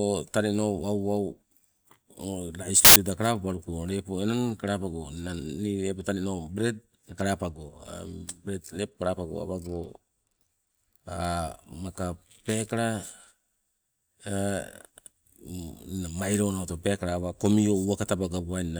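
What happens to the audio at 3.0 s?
Just before 3.0 s, from 2.85 to 2.96 s, file tags are played as audio. An embedded cover picture's compressed data is read as samples. It gives a hard-edged burst of very loud white noise.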